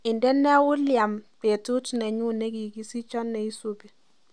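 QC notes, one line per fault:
Nothing to flag on this speech clip; there's no fault to log here.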